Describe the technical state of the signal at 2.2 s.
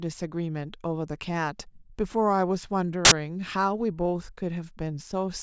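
At 2.2 s the speech signal is intact, with no dropout, clipping, glitch or other technical fault at that moment.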